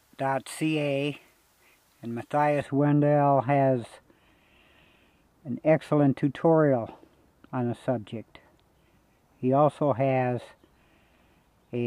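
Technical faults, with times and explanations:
2.62 to 11.86 s, de-emphasis applied wrongly: from 2.62 s onward the treble rolls off in a smooth, continuous slope, reaching about 11 dB down at 10 kHz relative to 1 kHz. This is a de-emphasis filter acting on audio that was never pre-emphasised, or a second pass of one, so high frequencies are cut with nothing to compensate. Detail and air are lost above a few kHz, leaving the sound dull and muffled to the end.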